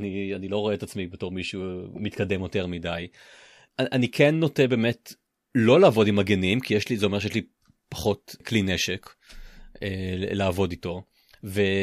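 No technical faults can be heard at any point in this speech recording. Nothing in the signal calls for comment.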